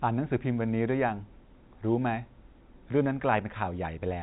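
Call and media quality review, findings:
No faults found in this speech.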